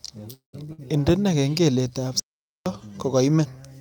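From 0.33 to 0.67 s there's a call audio freeze. The last sound gets stretched into a fading tail, then drops to silence for roughly 120 ms, likely because packets stalled and the jitter buffer ran dry. Nothing is skipped when it resumes, so everything after just lands about 0.2 s later.

Right after, at 0.73 to 0.80 s, comes a burst of packet loss. About 57 ms is patched over with a fading continuation of the previous sound, and then the audio jumps ahead, with roughly 60 ms of the real material gone.

Then from 2.20 to 2.66 s there's an audio dropout to silence. The sound cuts off mid-flow into silence for about 463 ms, with no room tone underneath, and comes back in abruptly. It's likely a lost input or link, and whatever was said in that stretch is simply missing.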